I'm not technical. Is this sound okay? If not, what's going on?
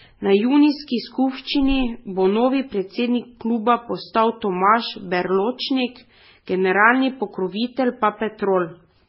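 No. Throughout the speech, nothing above 5.6 kHz survives, so it sounds dull. This is likely transcoding between lossy codecs: it was compressed twice.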